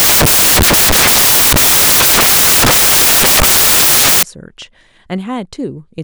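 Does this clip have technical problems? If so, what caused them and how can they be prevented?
Yes. Loud, harsh broadband noise runs from 0.0 to 4.23 s: samples built from the wrong bytes put the fast-changing low bits on top. Prevent it by reading the correct byte order and alignment.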